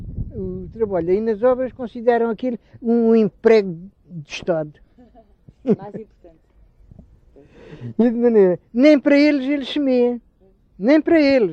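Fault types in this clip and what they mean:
There are no fault types in this clip.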